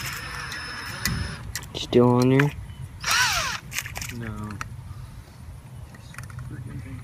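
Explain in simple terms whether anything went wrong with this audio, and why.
Nothing went wrong here: the audio runs without any glitches, dropouts or odd noises that would point to a technical problem along the way.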